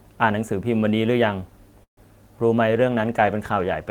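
Speech carrying two call-transport faults. From 1.83 to 1.99 s a call audio freeze occurs, likely from packets stalling in transit until the jitter buffer ran empty. The last sound is carried on as a fading fill that falls silent for about 100 ms, then the speech resumes where it stopped, delayed by 138 ms with nothing lost. From 2.69 s to the end, a call bitrate drop halves the encoder's budget from 32 to 16 kbps, so the speech is coded more coarsely for the rest of the clip.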